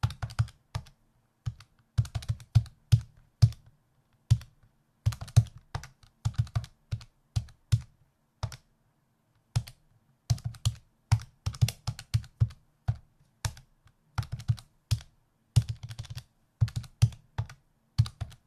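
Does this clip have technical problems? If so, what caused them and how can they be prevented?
No, this recording of sounds has no audible technical faults. There is nothing here to trace to a cause or to prevent.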